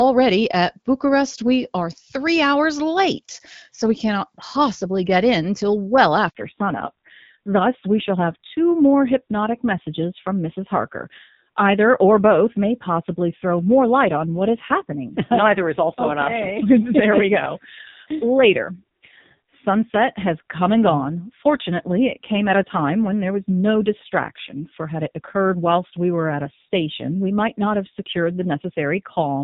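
At 6.29 s, just after "get in till well", a handover gap of 60 ms cuts the speech off. While the call was moved from one network to another, no speech frames reached the receiver, so the sound decays within a few tens of milliseconds and stays silent until 6.35 s, when the new link begins carrying audio. Whatever was said inside that window is gone.

From 6.35 s to the end, the call has fallen back to narrowband. Before the switch the audio has the light coding texture of the AMR wideband (HD Voice) codec, consistent with a rate around 12.65 kbit/s. Afterwards nothing remains above 4 kHz, which strips sibilants and consonant detail and makes the speech dull. The added roughness points to a low-rate AMR narrowband mode, near 5.9 kbit/s.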